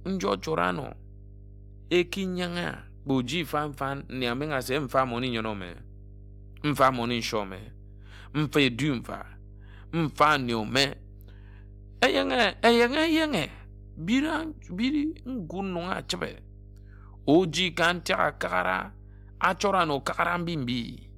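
A steady low drone sits under the speech from start to finish, a mains hum at 50 Hz running roughly 20 dB below the speech. Power-line current is leaking into the signal, most plausibly through a ground loop or a nearby transformer.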